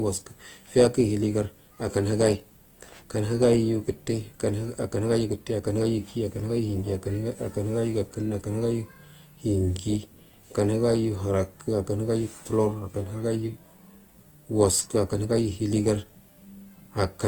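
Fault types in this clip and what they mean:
Opus compression: The speech sounds clearly grainy and rough, with tones turned noisy instead of swirling, while the top end still extends to about 20.1 kHz. This is likely Opus coding in its full-band music mode, starved of bits at a rate near 24 kbps.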